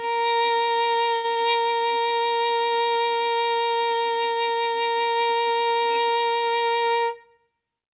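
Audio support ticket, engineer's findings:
1.16 to 1.26 s: short stall from a late packet. Jitter buffer ran dry, receiver held the music for about 78 ms and resumed in place, nothing lost.

6.96 to 7.47 s: jitter buffer speed-up, music rushes at 115% with pitch kept, roughly a tenth of a second trimmed to shed delay.

Call path sounds like G.711 mu-law, nothing above 4 kHz.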